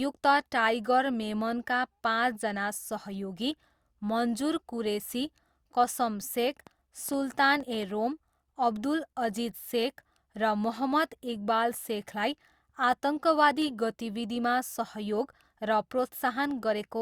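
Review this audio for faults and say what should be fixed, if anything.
A train of clicks runs from 6.67 s to 7.84 s, just before "रोम अब्दुल": roughly seven similar pops at about 6 per second, unevenly spaced, peaking at about the level of the speech itself. Pulses of the same shape repeating like this are likely interference from nearby equipment or a faulty connection or power supply, each glitch stamping a sharp transient over the speech. To prevent it, move the recording chain away from noisy gear and check cables, grounding and interface buffer settings.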